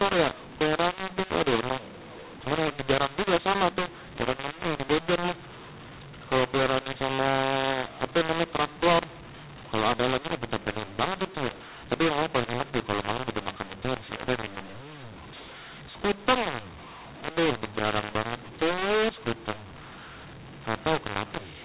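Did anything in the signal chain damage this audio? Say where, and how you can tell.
Yes. A mu-law and A-law mix-up at the codec decoder, throughout: A-law data read as mu-law scrambles levels into harsh distortion and noise-filled pauses, whereas clipping leaves silences clean.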